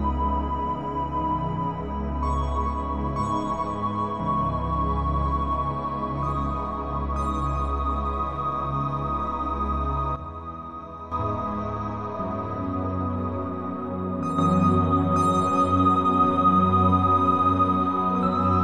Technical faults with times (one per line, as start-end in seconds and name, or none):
10.16-11.12 sudden gain jump
14.38-18.64 sudden gain jump